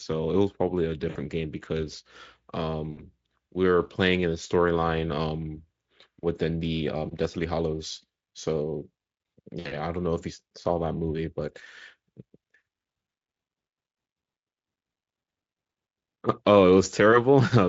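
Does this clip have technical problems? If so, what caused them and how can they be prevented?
Yes. VoIP packet loss concealed by the speech codec occurs at 1.09, 2.91 and 9.59 s. Each gap sounds like about 60 ms of missing audio, which points to three lost 20 ms frames. The decoder extrapolates a fading tone or coloured noise across each gap. Prevent it with a stable network path, a jitter buffer and forward error correction.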